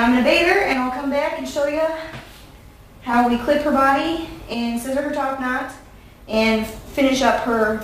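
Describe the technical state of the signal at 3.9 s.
At 3.9 s the signal is intact, with no dropout, distortion or other fault audible at that point.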